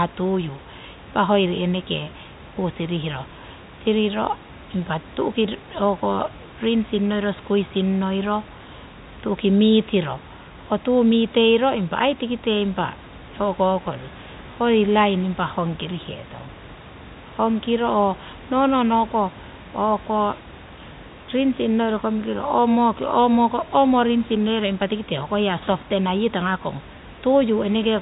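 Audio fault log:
No faults are audible: the speech sits about 21 dB above the room noise, and the band stops near 3.8 kHz, which fits G.711 telephone coding at 64 kbps, with any quantisation noise faint at most.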